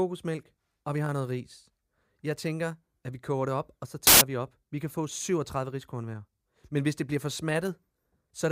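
At 4.07 to 4.21 s, after "det op og så", loud, harsh broadband noise bursts out: samples built from the wrong bytes. Misassembled low bits became each sample's largest part.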